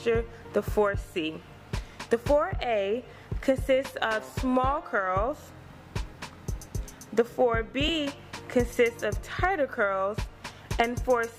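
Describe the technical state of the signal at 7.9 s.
At 7.88 s there's lost LE Audio frames, a 7.5 ms dropout concealed by reusing the previous spectrum with random signs, so it comes out as a brief noisy smear.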